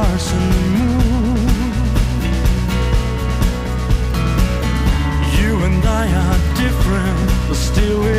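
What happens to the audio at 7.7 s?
Nothing goes wrong at 7.7 s; the audio plays through that moment intact, with no dropout, click or distortion.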